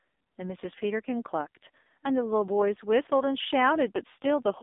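Speech heard throughout through an AMR narrowband mobile codec with heavy damage. The voice sounds buzzy and synthetic, which points to a low rate near 5.9 kbps. A spectrogram shows energy confined to roughly 250 Hz to 3.7 kHz, with a hard ceiling and nothing above 3.8 kHz.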